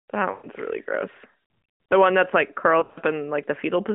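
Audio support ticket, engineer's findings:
Lost AMR speech frames, 0.32 to 0.46 s. About 120 ms smeared, held and fading toward silence, consistent with six consecutive 20 ms frames. Decoder reuses last good pitch and vocal tract settings at falling gain.

Lost AMR speech frames, 2.80 to 2.98 s. Broken warble and dips across 160 ms, longest single dropout near 60 ms. Scattered frame loss, likely radio errors failing the frame checksum. Same concealment, on a narrowband 200 Hz to 3.5 kHz path.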